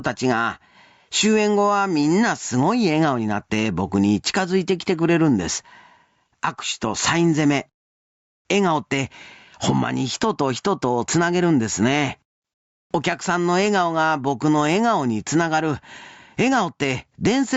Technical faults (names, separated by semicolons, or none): gain pumping